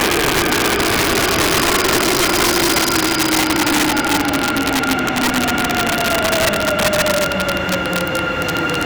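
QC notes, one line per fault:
Throughout, integer overflow: gain about 8 dB too hot wraps a few percent of peak samples to the opposite sign, producing harsh cracks sharper than clipping.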